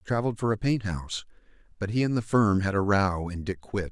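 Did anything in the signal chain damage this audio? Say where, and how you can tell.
No, nothing along the chain left a mark I can hear on this one, so there's nothing to chase down here.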